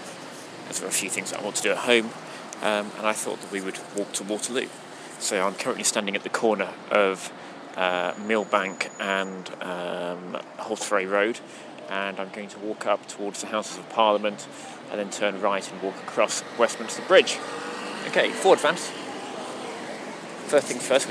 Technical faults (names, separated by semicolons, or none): pre-emphasis left on